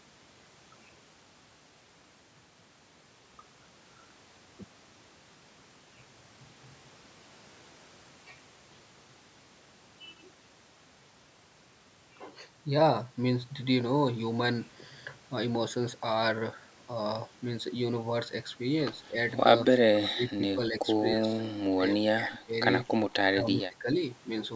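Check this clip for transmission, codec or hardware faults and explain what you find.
One fault type appears, confined to the final seconds of the speech.

Speech suppressed in double talk occurs at 19.09–19.15, 19.73–19.79, 20.07–20.83, 21.15–21.42, 21.7–22.54 and 23.23–23.89 s. The speech level drops by roughly 10 to 25 dB, most deeply around 20.1–20.8 s, giving audible dips. The likely cause is an echo canceller that could not separate the near talker from simultaneous far-end audio and attenuated both.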